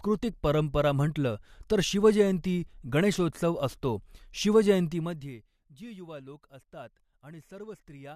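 No technical faults can be heard anywhere in the speech.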